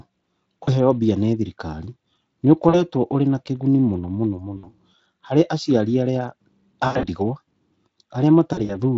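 VoIP packet loss concealed by the speech codec hits at 0.63, 2.69, 4.57, 6.87 and 8.53 s. The Speex decoder stretches its last pitch into fading, buzzy tone or coloured noise, with gaps up to 80 ms.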